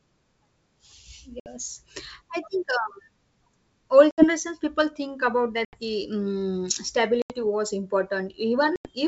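Packet loss on an ADPCM call cuts five hard-edged silent holes, at 1.40, 4.11, 5.65, 7.22 and 8.76 s. Each drops about 60 to 90 ms of audio, several packets' worth. The second comes just before "people think about", the third just after it. The decoder's predictor and step size lose step with the sender's. Speech returns slightly distorted. It settles within tens of milliseconds, against clear 7 kHz G.722 sound.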